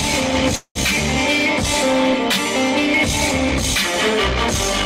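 A call audio freeze runs from 0.55 s to 0.77 s. At 0.55 s the audio stops advancing: the last sound is stretched into a decaying buzz or hiss, which gives way to about 70 ms of silence. At 0.77 s the audio resumes exactly where it halted, with nothing dropped, so everything afterwards plays about 198 ms late. The likely cause is delayed packets draining the receiver's jitter buffer, with concealment filling the wait.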